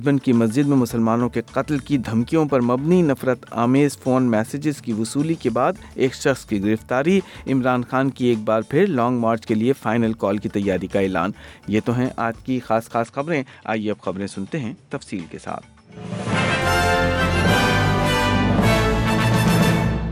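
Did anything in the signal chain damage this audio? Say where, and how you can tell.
Yes. At the device or driver stage, the recording was most likely moved onto a poorer input device (input switched to a poorer device) from 13.04 s to 16.62 s, and then back again. Across that span the band stops at 10.5 kHz, the level drops by roughly 5 dB, and a different background hiss appears, sitting far below the signal. The change in tone is abrupt in both directions, with no silence at either switch.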